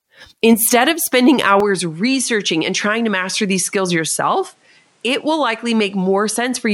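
Likely an input switched to a poorer device at 1.6 s: from there, nothing sounds above 11.4 kHz, the level falls about 5 dB, and faint new background noise appears.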